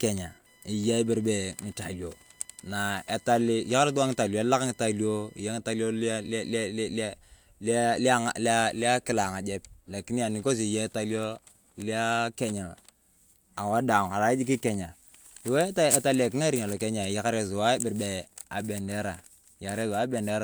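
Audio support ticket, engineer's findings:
Computer activity noise, 0.00–6.58 s: buzzing at roughly 1 kHz pulse rate, about 35 dB below speech. CPU/GPU load currents modulating shared audio ground; tracks machine activity, not program.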